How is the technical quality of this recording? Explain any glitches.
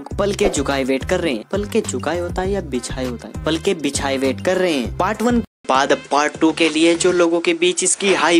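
The recording has two clear faults: a brief decoding glitch early on and a drop in quality for the final stretch.

At 1.42 s there is damaged data in a compressed stream. Corrupted bytes make the decoder misread a frame and resync, producing a tiny blip. On a spectrogram it shows as a thin vertical smear, and the waveform has a small discontinuity there.

From 5.45 s to the end, the sound turns duller. The likely cause is the input switching to a poorer device. A gap of about 200 ms marks the change, followed by a level shift of around 5 dB and a new noise floor roughly 35 dB down. A spectrogram shows nothing above 10.4 kHz.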